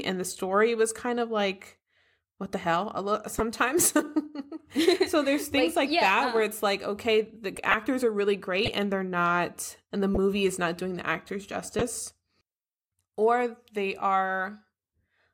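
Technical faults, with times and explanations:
3.38–3.40 s, 7.56–7.74 s, 8.66–8.70 s, 10.14–10.17 s, 11.79–11.82 s: corrupt frame decoded. Damaged compressed frames were played anyway, putting energy in wrong frequencies. The result is short chirps or noise bursts, seen as vertical smears on a spectrogram. The longest and loudest, near 7.6 s, peaks at about −5 dBFS.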